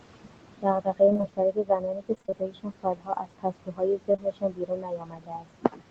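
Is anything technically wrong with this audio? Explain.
Yes. The noise suppressor is working too hard, and the call path loses packets in places.

Noise suppressor artifacts run through the whole clip. The suppressor pulls steady background down by about 22 dB, frame by frame. The noise dips between phrases and swells under them.

Speech cut by the noise suppressor runs from 0.6 s to the end. The suppressor treats parts of the speech as noise and lowers them with the background, by up to about 22 dB. Soft consonants and word endings sound swallowed or faint.

Repeated packet loss (robotic sound) occurs from 1.05 to 1.25 s and again from 2.15 to 2.34 s. Each stretch has five short gaps, none longer than 25 ms. The receiver patches each one by extending the last sound. About half of each stretch is patched, so it sounds choppy and robotic.

Short concealed packet loss occurs at 4.12 to 4.16 s and 4.16 to 4.20 s. 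About 20 ms goes missing each time. Each hole is filled from the preceding sound and then blended back. The result is a brief smear or wobble. The audio tops out at 8 kHz, which fits an Opus call codec.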